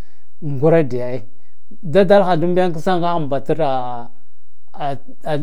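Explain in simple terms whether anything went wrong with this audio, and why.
DC offset, throughout the whole clip: the entire speech waveform sits shifted away from its centre line, which you can't hear directly but which wastes loudness room.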